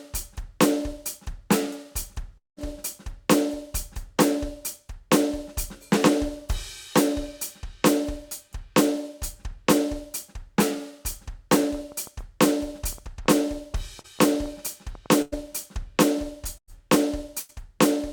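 At 2.37 s the music breaks off into a fading continuation of the last sound that thins to silence before playback returns at 2.59 s, the passage in between simply gone. This points to a long network dropout, likely a stall where about 200 ms of audio never arrived and the receiver extended the last sound before giving up.

From 11.63 s to 15.07 s a train of clicks ticks over the music, around six per second at an uneven pace, roughly twenty in all and peaking about as loud as the music itself. Same-shaped pulses like these most likely come from interference or a faulty connection or power supply injecting spikes.

Inside that stretch, at 14.01 to 14.06 s, there is a brief smear where the sound wobbles momentarily. That is short concealed packet loss: about 40 ms failed to reach the decoder in time, and the receiver bridged the hole by carrying the previous sound forward, then blended back.

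Near the end come three held, fading gaps at 15.22 to 15.34 s, 16.58 to 16.70 s and 17.40 to 17.51 s, each followed by the music resuming further on. Each is a burst of packet loss of about 100 ms, which the receiver covered by stretching the last sound and turning it down.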